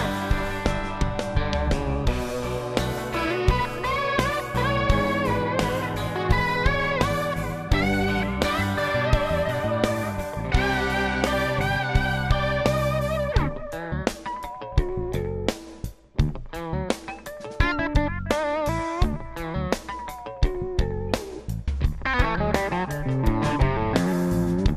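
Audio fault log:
Throughout: MP2 compression damage, plainly audible. The sound is dull and lacks top end, and a gurgling, granular roughness runs through it as upper frequency bands drop in and out. This likely comes from MPEG Layer II coding at a low bitrate, consistent with about 80 kbps. At that rate there are too few bits for all 32 sub-bands, so the highest are switched off intermittently and the remaining ones are quantised coarsely.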